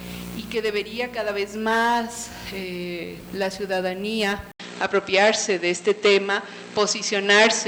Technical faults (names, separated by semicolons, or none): input switched to a poorer device